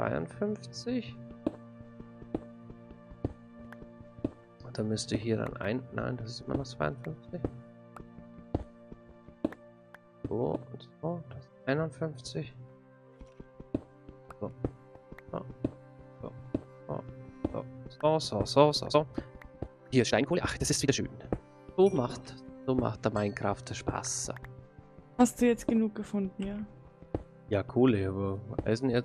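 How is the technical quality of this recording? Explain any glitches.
One glitch stands out. From 18.84 to 21.02 s, a time-stretched section runs at double speed, rushed at unchanged pitch, likely software dropping short slices; the waveform shows compressed, spliced segments.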